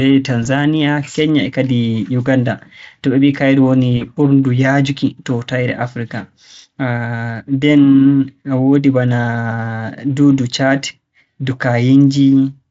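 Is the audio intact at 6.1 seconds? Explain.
Yes, at 6.1 seconds the speech comes through intact, with no audible fault at that moment.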